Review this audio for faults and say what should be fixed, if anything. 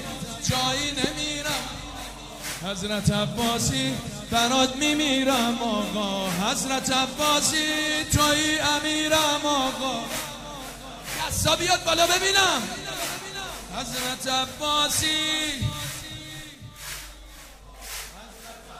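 A single loud pop sits at 1.04 to 1.06 s, peaking roughly 15 dB above the surrounding sound, which carries on unbroken underneath it. A brief voltage step, likely from a plug, switch, static discharge or driver glitch, entered the signal chain and was shaped by the circuits after it into this short thump. Because nothing is lost or repeated, it differs from a dropout click. To prevent it, secure connections and mute the output before switching.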